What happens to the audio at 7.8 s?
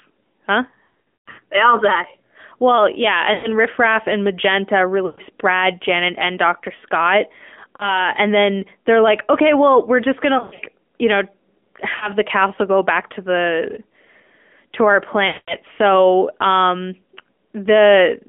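From 7.76 to 8.05 s the speech briefly smears into a dipping warble, then returns weak or rough for a moment. These are lost AMR speech frames: about 40 ms of data failed, which fits two 20 ms frames, and the decoder replayed the last pitch and vocal-tract settings at falling gain. Around it, the AMR narrowband mobile codec at 10.2 kbps holds the sound to a 250 Hz to 3.4 kHz band, with plainly audible buzzy, synthetic coloration.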